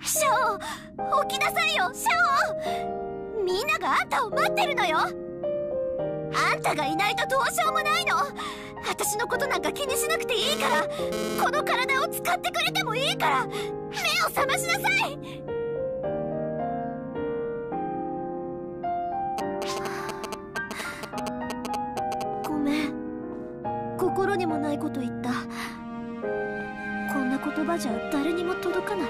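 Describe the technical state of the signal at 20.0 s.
At 20.0 s the signal carries GSM signalling bursts, running from 19.38 to 22.46 s. A nearby 2G phone sends short groups of radio bursts that the audio circuit rectifies into galloping ticks and 217 Hz buzzes, only slightly below the programme level, unlike an active call's steady buzz.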